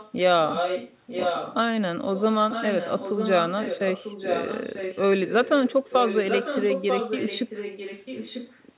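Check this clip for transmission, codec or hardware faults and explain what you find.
One fault stands out, an echo leak. It occurs at 0 to 0.13 s, 0.48 to 1.55 s, 2.15 to 2.23 s, 2.5 to 5.02 s and 5.26 to 8.57 s. A copy of the speech returns about 0.94 s late. It is faint at the start, strongest from 0.48 to 1.55 s, and moderate in the long later stretches. The likely cause is an echo canceller on a loudspeaker end that failed to remove its own playback before sending it back.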